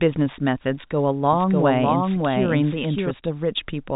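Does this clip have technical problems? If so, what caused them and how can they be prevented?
Yes. From 1.33 s to 3.11 s the speech is doubled: a second copy at roughly the same level as the original plays about 0.7 s behind it. The copy has no decay or room colour, and it starts and stops abruptly at those times. It shares the telephone band limit of the G.711 path, with nothing above 3.8 kHz. This doubled audio track is likely caused by the same signal being captured again through a slower route, or by an edit that leaves two offset copies overlapping. To prevent it, make sure each source reaches the mix through only one path, and check edits for duplicated regions before export.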